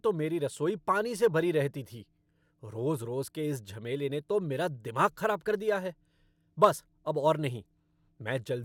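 Speech recording with no audible technical faults anywhere in the clip.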